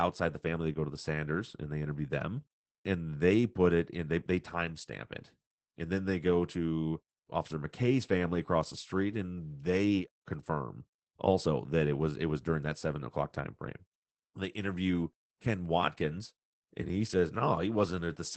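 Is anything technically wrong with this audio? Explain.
Yes. Throughout the speech, the signal has passed through Opus voice compression in its SILK linear-prediction mode, with the band limited to wideband, so nothing survives above about 8 kHz. The damage is plainly audible and fits a low rate near 12 kbps in 20 ms frames. With so few bits, the excitation driving the predictor is coded coarsely, and the speech comes out muffled, hoarse and faintly robotic.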